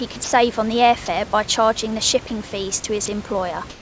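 Early on, at 0.12 to 0.16 s and 0.24 to 0.32 s (just before "on the air fare"), the speech briefly drops out to flat hiss. The same happens at 2.28 to 2.30 s, right after "fare by charging the", and again at 3.06 to 3.08 s. That's likely sound dropped by the voice detector: it mistook bits of speech for background, stopped sending for 20 to 80 ms, and the receiver filled the gap with noise.

From 3.70 s to the end, the room's background, sitting about 23 dB below the loud parts, turns smooth and featureless and about 2 dB quieter. That's likely comfort noise in place of the background, with the sender pausing transmission and the receiver synthesising a rough stand-in. The G.722 call path caps everything at 8 kHz.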